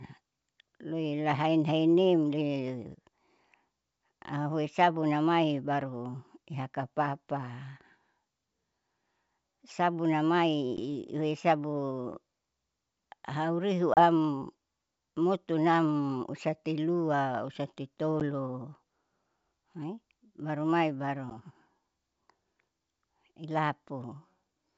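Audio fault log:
10.77–10.80 s, 13.94–14.01 s, 18.20–18.22 s, 21.30–21.36 s: packet loss on an ADPCM call. There are abrupt silent gaps of 10 ms, 30 ms, 10 ms and 10 ms, each roughly one packet except the second, which is about three. After each gap the decoder's predictor and step size no longer match the sender's, so the speech resumes slightly distorted and settles within tens of milliseconds.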